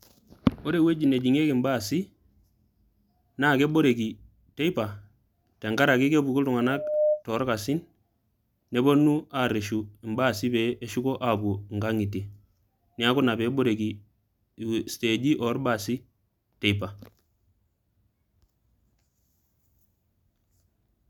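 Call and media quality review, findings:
Loudspeaker feedback squeal, 6.58–7.23 s, after "tenkaraki kepuku", cleared before "too orkasin". A single 604 Hz tone swells over under half a second to a few dB above the speech. The mic-to-speaker loop gain exceeds unity at that frequency. The self-building rise separates it from steady hum.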